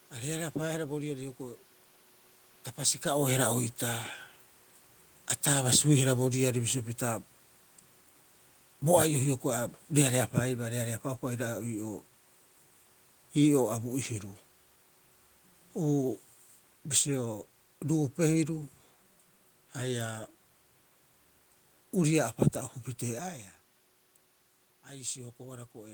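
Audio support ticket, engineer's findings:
Automatic gain falling, 3.09–6.8 s and 9.82–18.53 s: speech level sinks about 3 dB each time, room noise dropping with it. AGC is reducing gain after input it judged too loud or too noisy. Waveform envelope tapers; spectrogram shows the background floor darkening alongside. Level shifts near 3 s and 23 s are the talker moving, not the system.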